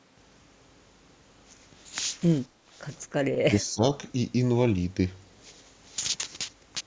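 From 2.48 to 2.72 s the room sound is pulled down in a background gated by the echo canceller: while the far end played through the loudspeaker, the canceller clamped the microphone path, cutting the ambience by about 11 dB for around a fifth of a second before releasing it. On a waveform the noise floor narrows into a short trough. On the spectrogram the background haze thins across the band, which stops at 8 kHz as expected from the call's microphone processing.

At 3.44 to 3.83 s the talker's own speech sinks sharply, by roughly 20 dB over about 300 ms. This is likely speech suppressed in double talk: with both sides speaking at once, the canceller could not tell the near voice from loudspeaker echo and attenuated everything. The waveform shows the speech envelope dropping into a deep dip. The spectrogram shows the speech energy weakening until the suppression lifts.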